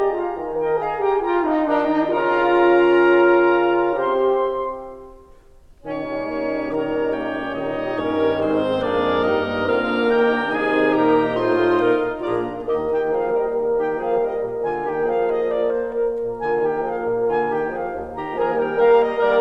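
No technical faults can be heard anywhere in this music clip. Nothing drops out, clicks, distorts or breaks up at any point.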